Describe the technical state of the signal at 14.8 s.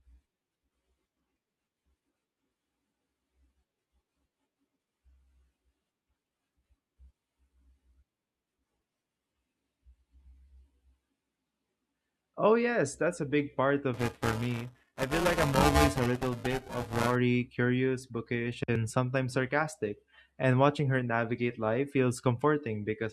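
At 14.8 s the signal shows buffer tearing, running from 13.94 to 17.16 s, between "that's a big part" and "curious bookish and sometimes". Writer and reader cross inside each period, so most of every buffer replays audio a few milliseconds stale, producing a robotic 375 Hz buzz, which fits a 128-sample buffer.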